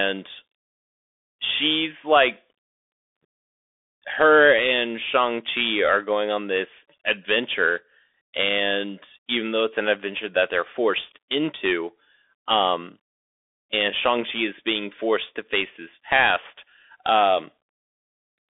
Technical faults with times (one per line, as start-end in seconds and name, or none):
0.00-18.57 Bluetooth CVSD headset codec